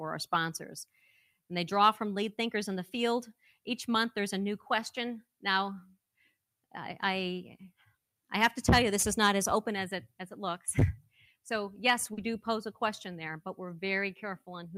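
Sound cut by the noise suppressor appears five times, at 0.88 to 1.5 s, 3.4 to 3.66 s, 6.18 to 6.35 s, 7.71 to 7.95 s and 11.02 to 11.46 s. Each time the suppressor misjudged the sound as background noise and pulled its gain down, by about 14 to 20 dB at the deepest point, with the longest dip lasting around half a second. These passages sink in level.

Short concealed packet loss follows at 12.13 to 12.20 s. About 40 ms of audio failed to reach the decoder in time, and the receiver covered the hole by extending the preceding sound before blending back into the real signal. The patch comes across as a brief smear or wobble.

A lost packet rebuilt from error correction sits inside that stretch at 12.17 to 12.19 s. Here about 20 ms was restored from a low-bitrate backup copy carried by the following packet, the kind Opus in-band forward error correction provides. There is no gap, but that moment sounds rougher and noisier than the audio around it.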